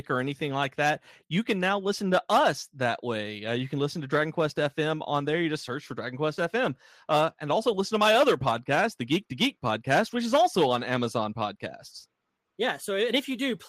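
Nothing stood out on listening to the speech in this recording.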